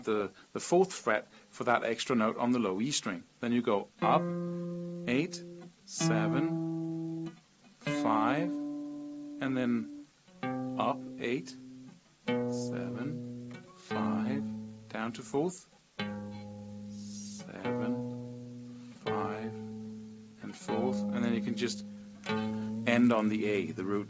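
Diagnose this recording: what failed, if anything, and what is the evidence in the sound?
The fault is a resampler restarted on every block, in the sample-rate conversion stage. From 22.29 s to the end, a 100 Hz buzz rides on the sound, present only with signal. Each 10 ms block went from 24 kHz to 16 kHz alone, leaving an error at every edge.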